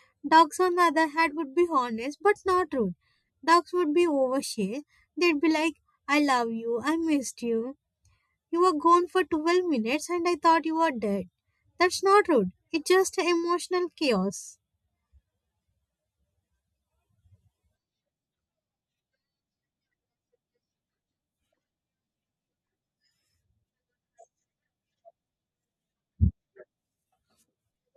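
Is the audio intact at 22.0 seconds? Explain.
Yes, the speech at 22.0 seconds plays through intact, with no dropout, glitch or other fault at that moment.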